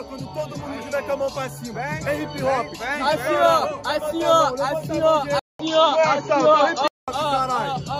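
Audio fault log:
5.39–7.08 s, input switched to a poorer device: a 200 ms gap, then the sound turns dull and boxy with nothing above 7 kHz, a level shift of roughly 5 dB and a faint new noise floor, likely a switch to a narrower-band microphone.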